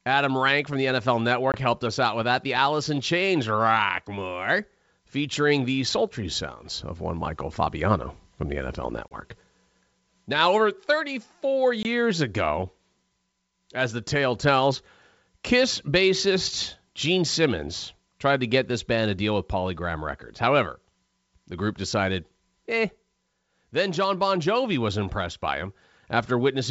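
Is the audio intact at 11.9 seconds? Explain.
No. Packet loss on this G.722 ADPCM call removed a couple of packets at 11.83 to 11.86 s, filling 20 ms with silence and knocking the decoder's predictor and step size out of step. A hard-edged gap follows, then speech returns slightly distorted, settling over tens of milliseconds around 11.9 s.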